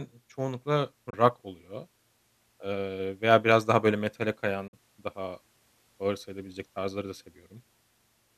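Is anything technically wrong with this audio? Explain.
Yes, there are two digital broadcast dropouts. The first runs from 1.10 to 1.14 s. The second, from 4.67 to 4.74 s, follows "biraz daha böyle metale". Each time the receiver discarded bad frames and muted, fading out over about 8 ms. That left gaps of 24 ms and 48 ms, consistent with one and two lost frames. The speech there is gone, not just quieter.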